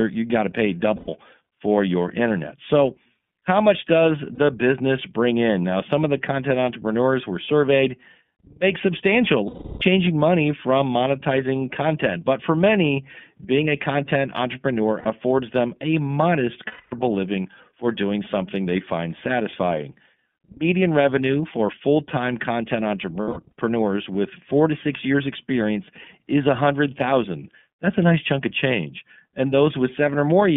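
Throughout, the speech is narrow and slightly rough and synthetic, with nothing above 3.4 kHz. This is the iLBC codec, whose 30 ms frames point to its 13.33 kbps mode. At 0.96 s (120 ms), 4.35 s (30 ms), 9.47 s (330 ms), 15.0 s (60 ms), 16.67 s (240 ms) and 23.22 s, the speech gives way to a held, buzzy, breathy vowel that fades on the longer gaps, then recovers almost at once. These are lost iLBC frames. The decoder repeated the last pitch cycle mixed with noise. At 23.22 s the losses are scattered over 300 ms, with the longest run of about 70 ms.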